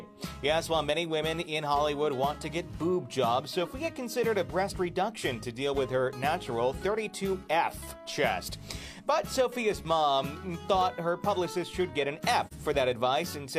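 Right near the end, from about 12.46 to 12.53 s, there's a short dropout that sounds like AAC frame loss with muting. The decoder lost a chunk of data, roughly 43 ms of audio, which fits a single lost frame, and simply zeroed that spectrum instead of guessing at it. Because AAC's overlapping windows blend neighbouring frames, the sound fades down and back up rather than cutting off sharply, so you hear a brief, soft-edged hole in the audio.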